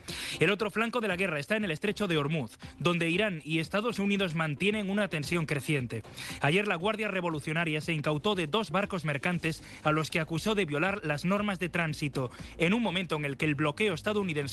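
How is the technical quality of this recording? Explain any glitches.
The recording has one cluster of glitches. It came through a call path whose top end stops near 12 kHz, which fits a low-bitrate Opus stream.

Between 3.87 and 5.36 s there are scattered short gaps. About ten small holes appear, none much longer than 15 ms. The receiver filled each by extending the preceding sound, roughly a tenth of a second in total. You hear brief ticks, smears and hiccups.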